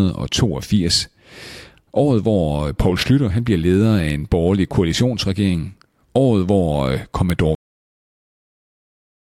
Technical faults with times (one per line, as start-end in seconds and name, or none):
7.30 uninitialised buffer
7.55-9.31 cut-off end